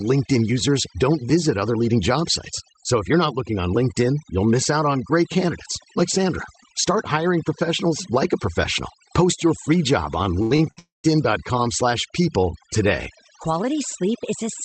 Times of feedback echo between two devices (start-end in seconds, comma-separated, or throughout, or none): none